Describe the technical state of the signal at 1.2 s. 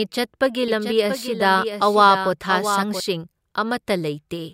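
At 1.2 s the speech carries a doubled audio track, present from 0.68 to 3.00 s: a second full-band copy, about 10 dB quieter, trails by roughly 0.7 s, likely from a slower capture path. A spectrogram shows faint, undecayed duplicate patterns offset in time, with abrupt boundaries.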